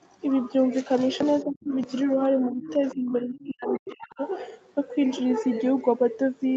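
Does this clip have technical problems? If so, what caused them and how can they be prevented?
Yes. The speech drops out in three places: from 1.45 to 1.73 s by about 25 dB, from 2.4 to 2.63 s by about 15 dB, and most heavily from 2.79 to 4.21 s, where it falls by about 40 dB across roughly a second in total. This is likely speech suppressed in double talk. The echo canceller could not tell the near talker from the loudspeaker echo while both sides spoke, so it attenuated everything. A full-duplex echo canceller with better double-talk detection and less aggressive residual suppression would prevent it.

The other side's voice leaks through at 1.6 to 1.64 s, very faint at about 35 dB below the speech, and again from 2.63 to 2.95 s at about 15 dB below. There is a third brief patch from 3.36 to 3.47 s at about 25 dB below. The likely cause is incomplete echo cancellation: the far-end audio played on the loudspeaker reached the microphone and was not fully subtracted. 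A headset, or a lower loudspeaker volume with better acoustic isolation and echo-path adaptation, would prevent it.

The audio carries nothing above 8 kHz, which fits the call's Opus coding at 48 kbps on an 8 kHz bandwidth.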